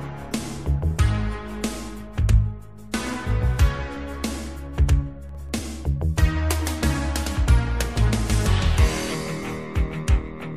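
At 2.92 s a short hiss comes just ahead of a sharp attack. This is pre-echo. The codec spreads its quantisation noise across a block of about 36 ms, and it never switches to shorter blocks for the transient. The noise meant for the loud attack leaks into the quiet moment before it, from 2.92 to 2.94 s. It rises about 16 dB over the silence, and the attack sounds blurred rather than crisp.

From 5.29 to 5.60 s a burst of gritty crackle tears through the sound. This is processor overload crackle. The processor falls behind and misses a run of audio deadlines, about ten of them. The buffers are very small, each around a millisecond and a half, which fits the rapid texture. Each missed buffer is skipped outright, leaving a hard-edged gap. The crackle stops as soon as the load clears.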